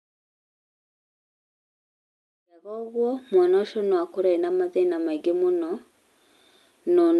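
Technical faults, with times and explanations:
Nothing here counts as a fault: the speech comes over a call line with its top end stopping around 12 kHz, which fits an Opus link at about 40 kbps, and the gentle fade-in that begins roughly at 2.5 s and finishes by 3.41 s is just an ordinary edit.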